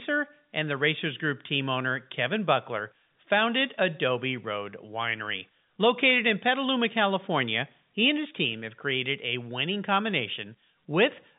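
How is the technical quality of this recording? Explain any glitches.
No glitches or faults audible.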